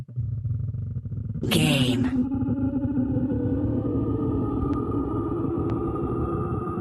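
At 1.43 to 1.45 s the sound jumps abruptly forward with no gap, about a second of audio gone: a skip ahead, where a stretch was dropped and the two sides joined directly. From 2.04 to 2.75 s the sound hurries at unchanged pitch, running about 6% fast. This is jitter buffer speed-up trimming pitch periods, roughly 50 ms in total, to shed excess delay. At 4.62 to 4.77 s two sharp loud pops sit on top of the continuing sound, peaking about 10 dB above it, likely from a voltage step such as a plug, switch or static discharge. At 5.70 s a single, weaker pop appears, about 5 dB above the signal, likely the same kind of electrical pulse. Throughout, the audio carries the coding texture of an Opus call path, with highs rolled off above 12 kHz, consistent with a bitrate of around 32 kbps.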